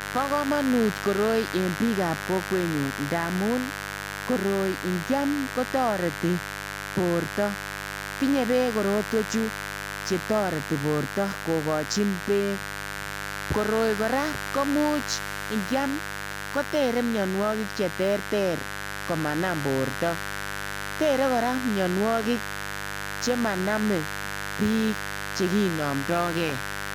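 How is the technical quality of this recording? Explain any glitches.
The recording is marred by mains buzz running through the whole speech clip. Sharp switching spikes from a dimmer, rectifier or poorly shielded cable enter twice every 50 Hz cycle, spreading harmonics up into the kilohertz range. The result is a steady, raspy buzz sitting roughly 10 dB below the speech, loud enough to stay obvious throughout.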